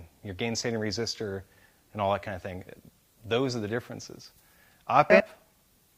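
No technical faults can be heard in this audio, so there is nothing to describe in time order.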